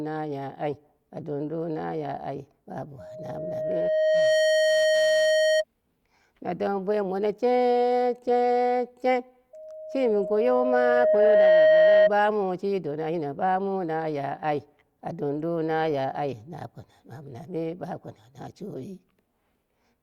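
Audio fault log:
2.98–5.64 s and 9.53–12.11 s, loudspeaker feedback squeal. A steady 625 Hz tone rises over the speech each time. The first swells over about a second and a half to roughly 5 dB above the speech. The second builds more slowly, over about two seconds, and peaks near 10 dB above. The microphone was hearing its own loudspeaker. At 625 Hz the loop gained more than it lost, so that tone fed on itself.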